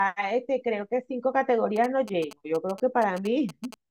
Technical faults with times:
1.76-3.74 GSM signalling bursts

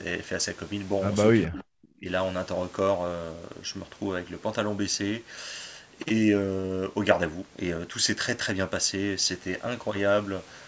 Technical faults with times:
1.48-2.08 speech suppressed in double talk

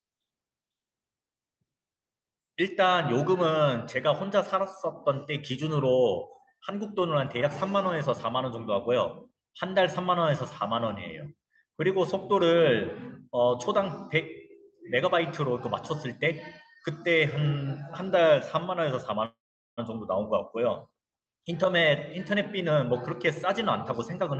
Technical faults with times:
19.25-19.79 call audio freeze
21.25-21.90 jitter buffer speed-up
22.34-23.49 jitter buffer speed-up
23.99-24.39 jitter buffer speed-up

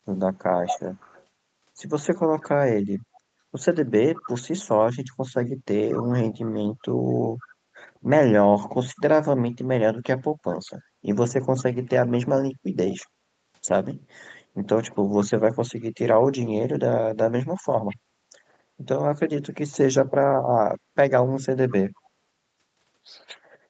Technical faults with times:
0.66-1.24 echo leak
4.16-4.29 echo leak
5.99-6.48 echo leak
7.40-7.55 echo leak
10.66-10.72 echo leak
12.86-13.07 echo leak
17.88-17.96 echo leak

